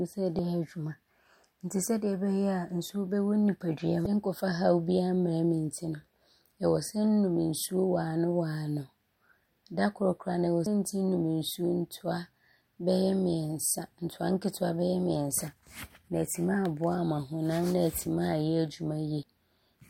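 Damaged data in a compressed stream disrupts the speech five times: at 0.36–0.39 s, 4.03–4.06 s, 10.63–10.66 s, 15.34 s and 19.20–19.23 s. Each time, corrupted bytes in the encoded stream cause the decoder to misread a frame, lose sync and hunt for the next valid header. Each event is heard as a short chirp, squawk, click or hole cutting across the speech, about 30 ms long except the one at 15.34 s, which is only a few milliseconds.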